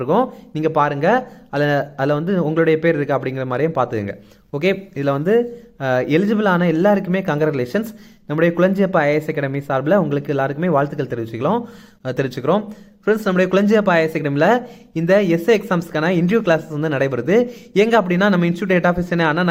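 Nothing stood out as a technical problem on listening.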